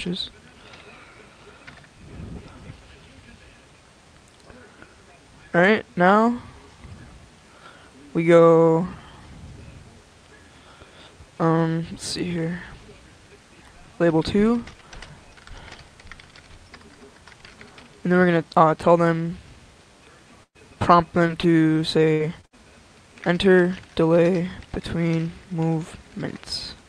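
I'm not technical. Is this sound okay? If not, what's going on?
No. From 20.43 to 21.45 s the sound turns choppy, with small pieces missing. This is repeated packet loss: bits of the call kept getting lost in transit, and each hole was patched by stretching the sound just before it.

At 21.97 s and again at 22.20 s there's a brief rough, grainy moment but no gap. That's a lost packet rebuilt from error correction: the next packet carried a lower-quality backup copy, which was played instead.

From 22.13 to 22.29 s and from 22.45 to 22.55 s the sound briefly holds as a buzz or fading hiss, then jumps ahead with a little missing. Each is a burst of packet loss, where several pieces in a row never arrived in time.

Between 22.41 and 22.45 s there's a quick smear or wobble. This is short concealed packet loss, where a tiny missing piece was filled in by continuing the sound before it, then blended back in.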